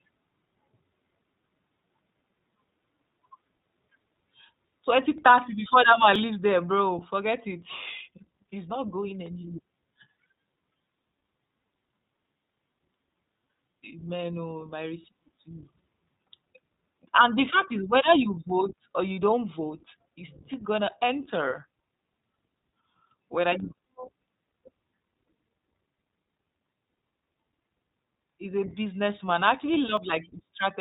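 From start to finish the speech passes through the iLBC codec, a narrowband VoIP coder that handles each 20 ms frame on its own terms instead of building on the previous one. The result is clear but slightly rough and synthetic, with the coding damage plainly audible and a thin, band-limited quality that fits the 15.2 kbps mode. On a spectrogram, energy stops sharply at about 4 kHz, leaving the region above empty for the whole clip.

At 6.16 s there is an abrupt jump forward in the speech, as if roughly 20 ms of sound had been cut out and the two sides butted together. This is likely a dropped buffer (overrun): the samples were not collected before the hardware overwrote them. The waveform shows a sudden discontinuity without any silent gap. A second, shorter skip of about 10 ms follows at 29.97 s, heard as the same sudden splice.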